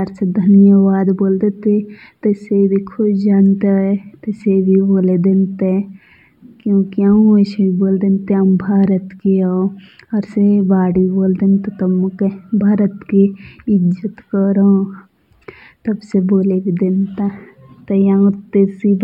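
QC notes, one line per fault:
Throughout: channel delay (comb filtering). The two channels appear offset by about 0.07 ms, then summed to mono. Shared content cancels at evenly spaced frequencies, the first near 7 kHz. The speech sounds hollow.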